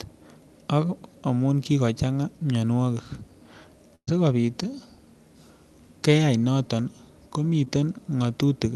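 At 3.95 to 4.09 s comes a burst of packet loss. The receiver stretches the last sound for about 118 ms, fading it toward silence. Then about 120 ms of speech is simply skipped.

At 7.65 to 7.68 s, a short concealed packet loss leaves a brief smear. About 10 ms is patched from the preceding sound, and roughly 20 ms of speech is lost.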